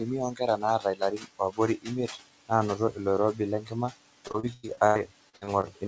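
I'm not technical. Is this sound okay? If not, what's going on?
No. Three problems are audible in this speech clip.

Throughout, the background hiss drops away between phrases and comes back under the talking. These are noise suppressor artifacts. A noise-cleaning stage is turning down anything it judges to be steady background noise, moment by moment. The room noise behind the voice is real, and the cleaner's constant pushing against it is what makes it pump.

In four places the voice itself goes faint or sounds swallowed: from 0.79 to 1.59 s, briefly around 1.77 to 1.89 s, from 2.77 to 2.99 s, and from 3.61 to 3.73 s. This is speech cut by the noise suppressor. The same cleaner mistook soft parts of the speech for background noise and turned them down with it. The first stretch is the longest, with roughly a third of a second of speech dimmed.

From 4.28 to 5.65 s the sound turns choppy and robotic, with bits missing. 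This is repeated packet loss. Small chunks of audio failed to arrive, about ten times in quick succession, each lasting up to about a tenth of a second. The call software covered each hole by stretching the last sound it had, which gives the robotic, stuttering effect. Nearly a third of that stretch is filler rather than real audio.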